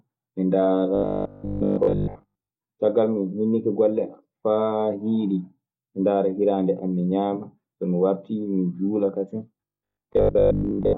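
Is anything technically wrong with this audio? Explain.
Yes. Robotic sound from repeated short buffers occurs from 0.95 to 2.49 s and again from 9.57 s, just after "juula kasen", to 10.97 s. The cause is likely audio arriving too seldom, so playback fills the gaps by looping the last short slice, about 20 ms, while much of the real signal is dropped. That repetition imposes a fixed 50 Hz pitch, turning the speech into a stiff metallic buzz that only loosely tracks it.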